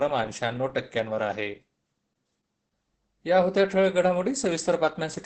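Speech with heavy Opus voice compression throughout: coarse SILK coding makes it muffled and hoarse, fitting about 10 kbps. A spectrogram shows nothing above 10.4 kHz and smeared harmonics.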